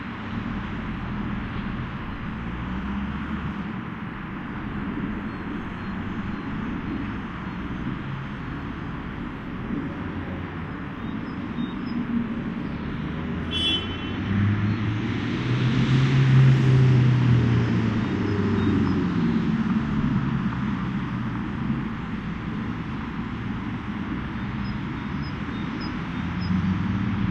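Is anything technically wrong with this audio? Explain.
No, the signal shows no technical faults that can be heard, with continuous playback throughout.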